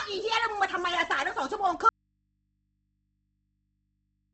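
Throughout, the speech is grainy and rough with nothing above 8.2 kHz, likely Opus compression in music mode at a rate that fits about 16 kbps; a spectrogram shows a hard ceiling and noise-filled bands. From 1.89 s to the end there is an audio dropout to a faint residue: the signal cuts abruptly, leaving only mains hum roughly 50 dB down, which appears as a flat waveform and thin low-frequency lines.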